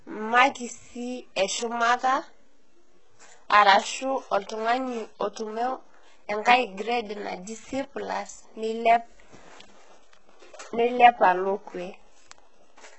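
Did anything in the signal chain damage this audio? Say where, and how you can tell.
Yes. The damage sits at the codec stage and runs through the whole speech clip. Nothing is present above 8 kHz, and the band just below that ceiling sounds synthetic: sibilants come out gritty and lispy, with a metallic sheen that doesn't follow the voice's harmonics. The coding damage is heavy, which fits a very low rate, around 8 kbps. This is likely HE-AAC compression, where spectral band replication copies lower bands upward under a coarse envelope instead of coding the real treble.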